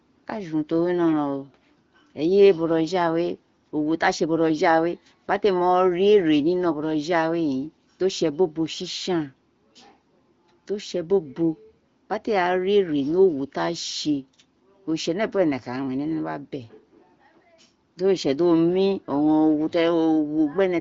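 Nothing in this stretch of speech stands out as a fault; it simply carries the band-limited sound of the AMR wideband (HD Voice) codec, with nothing above roughly 7.6 kHz, which fits its 18.25 kbit/s mode.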